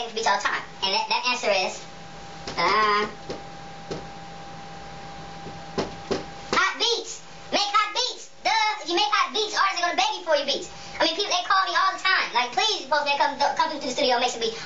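Throughout the clip the audio runs fast and sits high, a wrong sample rate fault: playback is about 1.38 times too quick and the pitch is raised by about 5.5 semitones. Speed and pitch move together by the same ratio, which separates this from a pitch shift or time-stretch, where one changes without the other. That ratio points to material recorded at 32 kHz being played out at 44.1 kHz with no rate conversion.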